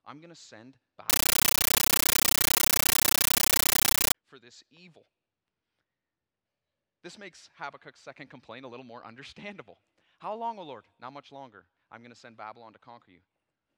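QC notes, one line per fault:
1.10–4.15 s, compressed stream played as audio: very loud chattering static after "I'm going to send"; 13.3 ms noise bursts 31 times a second fit undecoded AC-3 frames.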